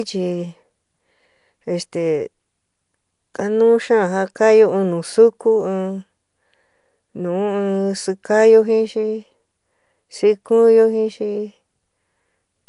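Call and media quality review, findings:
Likely Nellymoser compression (Nellymoser Asao, Flash-era mic codec), throughout the speech. Fixed coarse bit budget per 256-sample block starves weak bands, which are refilled with noise. Symptom: rough hissy halo, smeared underwater quality, nothing above 10.6 kHz. Damage plainly audible, fitting about 44 kbps.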